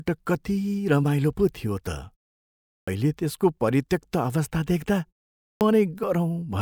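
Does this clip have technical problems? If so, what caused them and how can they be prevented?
Yes. There are two kinds of fault.

Clipped start after a pause: speech resumes abruptly at 2.82 s, after a 0.74 s pause, and at 5.55 s, after a 0.51 s pause. About 55 ms and 59 ms of the onset are missing while the output device wakes from sleep and locks again. On a waveform, each word starts at full amplitude with no rising edge. A spectrogram shows a hard vertical wall instead of the first sounds. To prevent it, keep the output device active through pauses, for example by disabling its power-saving idle mode.

Damaged data in a compressed stream: from 6.00 to 6.04 s a short blip cuts into the speech. Corrupted bytes there made the decoder misread frames and lose sync until it found the next frame header. A spectrogram shows a broadband vertical smear, and the waveform shows a sudden discontinuity. 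To prevent it, deliver the stream over a checked, error-protected transport and keep metadata out of the audio frames.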